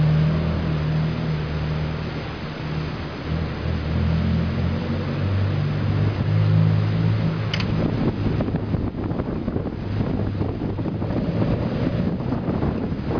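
No technical faults can be heard at any point, so there is nothing to describe in time order.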